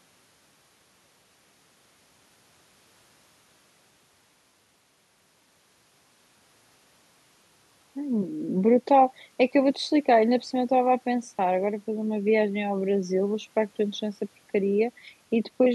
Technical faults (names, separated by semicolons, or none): none